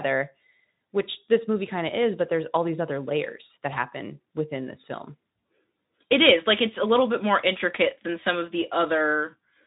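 Nothing in this speech recording stood out as a technical problem on listening.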